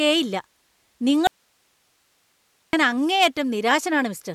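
From 1.27 to 2.73 s the speech suffers an audio dropout to a faint residue, likely a signal loss. Only faint hiss remains, seen as an abrupt, near-flat waveform gap.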